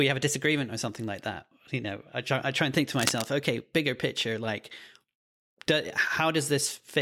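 Cable scratch noise runs from 2.95 to 3.29 s: a dense, uneven burst of scratching and rustling sits over the speech, only about 5 dB below it. The likely cause is a worn cable or connector being moved, its contact resistance jumping rapidly.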